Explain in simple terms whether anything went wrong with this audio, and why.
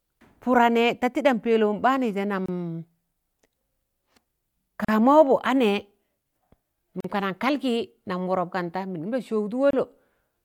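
The speech breaks four times for a split second: at 2.46 s for about 26 ms, at 4.85 s for about 38 ms, at 7.00 s for about 40 ms, and at 9.71 s for about 27 ms. Each is a gap at a join of encoded pieces. The recording was compressed in separate chunks and stuck back together without trimming the short stretch of silence each chunk picks up at its edges, so the speech briefly drops out and then resumes.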